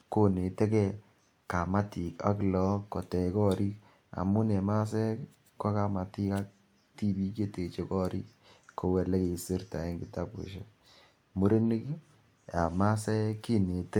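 A speech recording with no technical fault anywhere in it. Nothing audible calls for a time mark or a cause.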